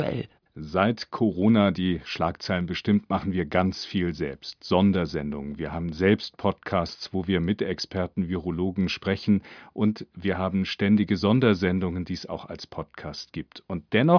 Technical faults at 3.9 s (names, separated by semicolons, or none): none